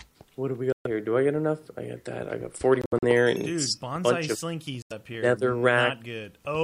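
At 0.72 to 0.87 s the sound cuts out abruptly and resumes about 128 ms later, as though playback had continued through the gap; the likely cause is a Bluetooth dropout, packets arriving too late for the headphones. At 2.82 to 3.04 s the losses are scattered across about 213 ms, with the longest hole 64 ms. A shorter 85 ms gap follows at 4.82 to 4.92 s. The gap lengths fit frames of roughly 21 ms each.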